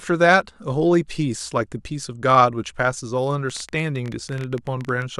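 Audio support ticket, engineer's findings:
Train of clicks, 3.50–5.03 s: irregular ticking at about 13 per second, some twenty pulses, peaks near signal level. Waveform shows narrow similar spikes; spectrogram shows thin full-band vertical lines. Likely interference from nearby equipment or a faulty connection or power supply injecting pulses.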